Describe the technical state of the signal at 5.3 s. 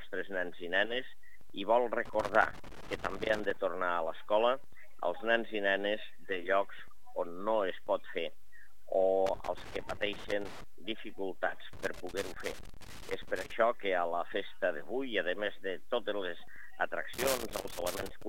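Nothing goes wrong with the signal at 5.3 s; the audio is intact at that point.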